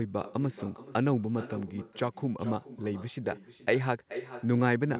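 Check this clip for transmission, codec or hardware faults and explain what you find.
One fault runs through the whole clip: echo with no canceller. The far end is evidently playing the call over a loudspeaker, and its microphone feeds that sound straight back with nothing to subtract it. Each phrase returns around 0.4 s later as a fainter copy, about 14 dB down and thinner, trailing behind the speech. Separately, the audio stops at 4 kHz, which fits a narrowband telephone codec such as G.711 on the call path.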